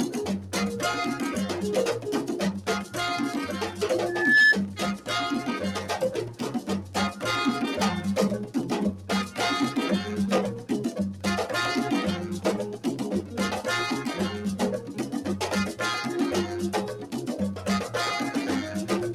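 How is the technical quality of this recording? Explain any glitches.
The recording is marred by a speech-tuned noise suppressor left running on material it was not designed for.

Noise suppressor applied to music or sounds: across the whole clip, the suppressor keeps treating sustained tones, ambience and decay as noise and pulling them down, with its gain reduction swinging by roughly 5 dB. Transients pass largely intact while held parts and tails sag behind them, so the sound pumps and flutters in level and comes across thinner and drier than it should.

Sound cut by the noise suppressor: at three points the suppressor misreads the material more severely and clamps it harder than its surroundings. At 6.29 to 6.94 s the level drops by about 8 dB, at 14.8 to 15.14 s by about 7 dB, and at 16.95 to 17.16 s by about 7 dB. Each dip lasts a few hundred milliseconds and is heard as a brief hollowing or sinking of the sustained content, with decays cut short.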